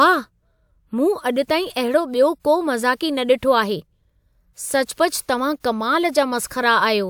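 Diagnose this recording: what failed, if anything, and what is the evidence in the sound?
Nothing failed; no faults heard.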